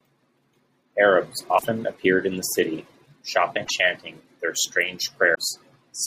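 A speech recording with three short breaks where the sound skips forward: from 1.57 to 1.65 s, from 3.64 to 3.71 s, and from 5.34 to 5.38 s. The likely cause is a broken MP3 bit reservoir. After frames were lost, the following frames reached back for borrowed data and decoded the wrong bytes, smearing a few frames. The frames are 24 ms long.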